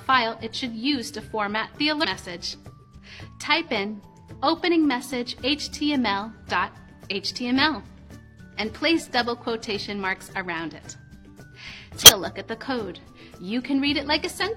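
Two brief glitches at 2.00–2.05 s and 12.03–12.09 s come from damaged data in a compressed stream, appearing as short broadband smears with waveform discontinuities.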